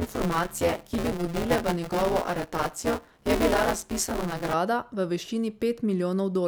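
Speech with buffer tearing from 0.00 to 4.54 s: a rattling robotic buzz at 172 Hz, which fits a 256-sample buffer, where writer and reader cross so part of each period replays audio about 20 ms old. Unlike dropouts, nothing goes silent, and the buzz vanishes in pauses.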